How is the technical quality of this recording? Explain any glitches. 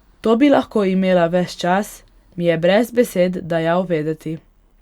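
The technical quality of the recording is good, and there are no glitches to explain.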